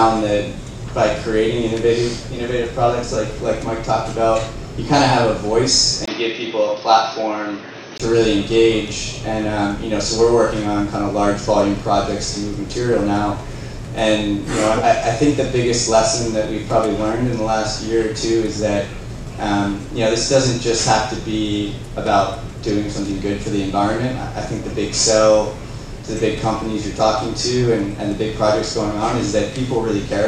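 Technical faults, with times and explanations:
6.06 to 8.00 s, input switched to a poorer device: the recording input most likely jumped to a lower-grade microphone or a headset's call profile, then back. After a brief gap of about 20 ms, the sound narrows and turns dull, with nothing above 6.2 kHz. A fresh noise floor appears, roughly 45 dB beneath the signal. Loudness stays about the same, so the change is heard as a shift in tone and background rather than in level.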